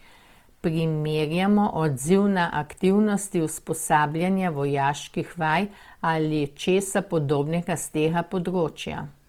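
From start to finish the speech has a rough, grainy texture. Tonal parts of the sound turn noisy and gritty, yet the full bandwidth is kept, without the hollow swirling of spectral holes. This is most likely Opus compression in its music (CELT) mode. The encoder preserves the energy in each band but fills bands it cannot afford to code exactly with folded or noise content. The plainly audible damage fits a low bitrate of around 24 kbps.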